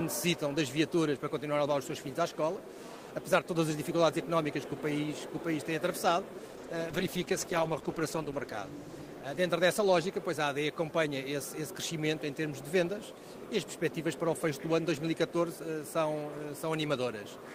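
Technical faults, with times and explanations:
6.61 to 10.33 s, call bitrate drop: the encoder's rate falls from 32 to 13 kbps, with the lowest rate held for about 1.9 s. Coarser coding turns the sound rough and muffled. A spectrogram shows the upper bands cut off flat, which fits Opus narrowing its bandwidth at low rates.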